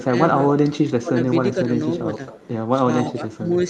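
A speech recording carries faint delayed copies of itself at 0.0 to 0.04 s, 1.24 to 1.3 s, 1.98 to 2.03 s and 2.28 to 2.48 s. This echo leak trails by about 0.27 s, sitting about 15 to 25 dB below the speech, likely from a loudspeaker echo the canceller missed. The speech dips at 0.83 to 1.16 s and 3.1 to 3.43 s, by up to about 15 dB. This speech suppressed in double talk likely comes from a canceller turning down both sides during overlapping talk.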